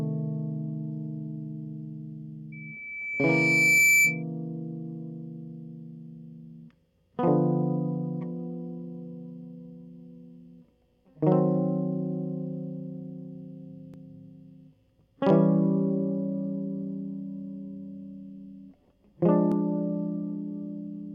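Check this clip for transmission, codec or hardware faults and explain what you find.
Loudspeaker feedback squeal from 2.52 to 4.23 s: a microphone was picking up the loudspeaker it was feeding, and at around 2.3 kHz the loop gain rose above one, so that frequency fed on itself with each trip around the loop. A piercing tone near 2.3 kHz swells over roughly a second and a half until it sits about 10 dB above the music, then stops at 4.23 s.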